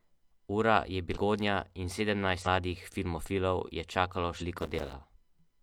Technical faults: compressed frames skipped; processor overload crackle

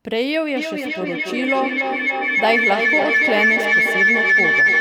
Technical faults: feedback howl

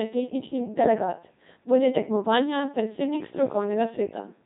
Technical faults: Codec 2 vocoder

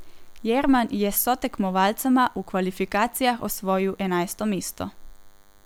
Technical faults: DECT cordless phone buzz

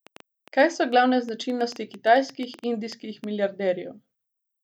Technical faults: train of clicks

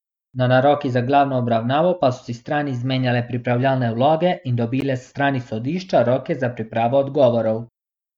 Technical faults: gap at a join of encoded pieces

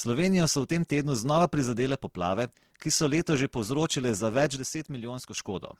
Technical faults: Opus compression; sudden gain jump

